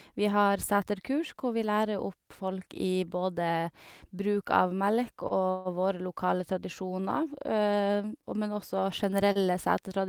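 At 5.28 s the speech hangs briefly in a short stall from a late packet. A packet missed its playout deadline, the jitter buffer emptied, and the receiver held the preceding sound for about 21 ms until the data arrived. Playback then resumed at the same point, so nothing is lost. The held segment is heard as a brief smear with a faint buzz or dip, and everything after it runs about 21 ms later.

From 5.50 to 5.68 s there is a longer call audio freeze. The likely cause is packets delayed in transit, leaving the jitter buffer empty for an extended moment. The receiver extends the last sound for about 151 ms as a buzzy or hissy tail that fades but never drops to silence. When the packets reach the receiver, playback picks up where it stopped, adding a gap of about 151 ms with no content missing.

At 9.32 s a second short stall from a late packet occurs. The buffer runs dry again, and the last sound is stretched for about 31 ms before playback continues intact. 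It is heard as a momentary hold with a slight buzz or dip, and the audio that follows is pushed back by that amount.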